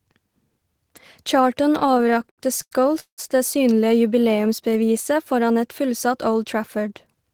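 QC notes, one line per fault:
1.79 to 3.20 s, repeated stalls (stutter): the speech keeps catching and hanging, sixteen times in this stretch, because packets reached the receiver late and its jitter buffer ran dry over and over. Each gap was bridged by stretching the last sound, the longest about 179 ms, so roughly 485 ms, about a third of the span, is filler, yet nothing is lost. Unlike a smooth slow-down, the drag comes in discrete hitches rather than an even stretch.
4.36 to 5.15 s, jitter buffer slow-down: here the speech runs evenly slower, at about 90% speed, with pitch unchanged and sounds drawn out. The receiver's buffer was low or had just raised its target delay, so it built a reserve by repeating single pitch periods and bits of pauses in quick succession, adding about 83 ms. What separates this from stutter is continuity: there are no hitches or held fragments, just a uniform lengthening.
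7.07 to 7.31 s, jitter buffer speed-up: right at the end the speech briefly hurries, at about 118% speed with pitch held steady. The buffer had more audio queued than its target, so the receiver trimmed short slices of one or a few pitch periods, removing about 50 ms in total. It is the mirror of the slow-down: time is taken away rather than added, giving a clipped, rushed feel instead of drawn-out sounds.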